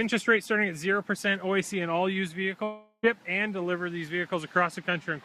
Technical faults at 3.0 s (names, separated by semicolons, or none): long network dropout